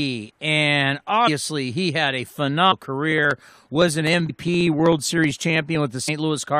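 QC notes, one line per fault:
1.27 s, 2.71 s, 4.29 s, 6.07 s: compressed frames skipped. The sound jumps ahead by roughly 100, 300, 150 and 100 ms, in steps that fit a frame of about 23 ms. Overlapping neighbour frames smear each join into a short blip rather than a hard click.
3.12–5.75 s: periodic USB or driver dropouts. Around fifty tiny gaps, each roughly half a millisecond, are skipped every 63.5 ms. The stream is blocked at a fixed interval, so regular ticks sound whenever signal is present.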